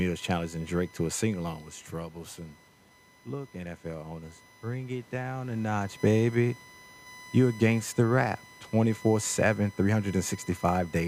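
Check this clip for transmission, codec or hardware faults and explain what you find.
Two faults are present: a USB whine under the whole recording and a gain rise by the automatic gain control.

The USB whine runs throughout as a steady tone at 1 kHz, loudest at its 2 kHz harmonic, sitting roughly 25 dB below the speech. Current pulses from the USB frame clock leak into the audio path through power or ground, producing this fixed-pitch whistle.

The automatic gain rising appears from 3.25 to 6.02 s. The input dropped by about 10 dB, and the control responded by slowly adding about 4 dB of gain. Speech and background swell together over those three seconds instead of the level holding steady.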